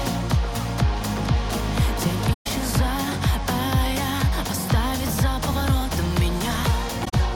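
Soft-edged dropouts at 2.33 s (about 128 ms) and 7.05 s (brief gaps over roughly 107 ms): AAC frame loss with muting, where lost frames decode as silence that fades in and out.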